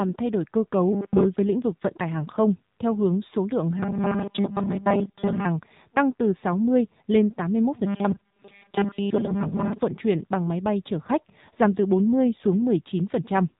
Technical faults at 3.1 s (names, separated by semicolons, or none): AMR narrowband mobile codec